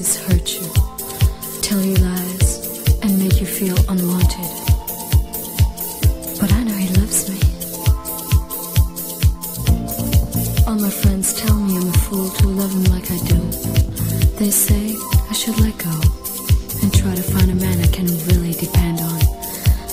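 At 1.62 s a very brief glitch cuts through the audio, the mark of damaged data in a compressed stream. Part of the encoded stream was corrupted, so the decoder misreads the affected frame, loses sync and hunts for the next valid frame header before playback recovers. A plain dropout or PCM glitch would sound like a click or a gap.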